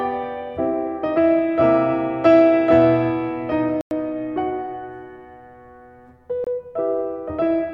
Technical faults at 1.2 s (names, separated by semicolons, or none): none